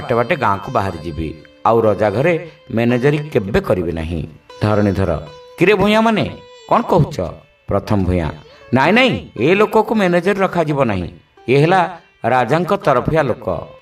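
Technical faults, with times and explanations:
10.36–10.38 s, chunks out of order: a tiny jumbled flicker, too brief to register as a gap. A 10 ms slice of the audio arrived one chunk late and was played after the slice that should have followed it. No audio is missing, but two neighbouring pieces swap places. That leaves three hard joins where the waveform jumps instead of continuing smoothly.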